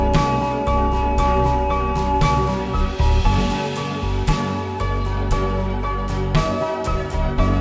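The audio plays back with a wrong sample rate throughout, running at about 0.73 times normal speed and about 5.6 semitones low, which fits 22 kHz material played at 16 kHz. A spectrogram shows every component shifted downward and stretched in time; waveform envelopes look correspondingly elongated.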